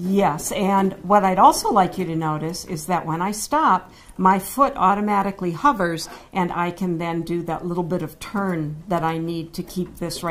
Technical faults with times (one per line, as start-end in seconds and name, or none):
none